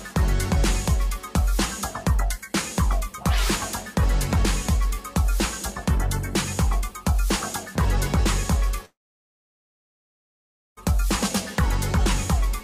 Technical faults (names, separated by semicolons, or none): long network dropout